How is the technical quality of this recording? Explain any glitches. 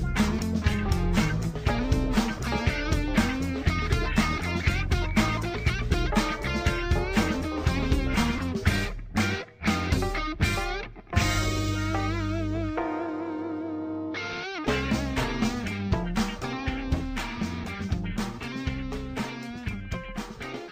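The recording has one glitch, a bit error spike at 9.80 s. A single bit flipped somewhere in memory or on a digital link, corrupting two consecutive samples so their values jumped by a power of two before snapping back. That produces one brief, sharp tick, peaking at about -33 dBFS, with broadband content that has no relation to the surrounding sound.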